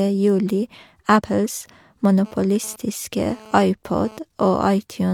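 At 1.16 to 1.21 s, damaged data in the compressed stream causes a short disturbance. The decoder hits corrupted bytes, misreads the frame and loses sync. It then hunts for the next valid frame header.

From 2.25 to 4.19 s, GSM phone buzz appears. A nearby phone's radio bursts at 217 Hz are rectified by the audio circuit. The result is a hard, raspy buzz rich in harmonics, about 23 dB below the speech. It comes and goes, which points to a data transfer.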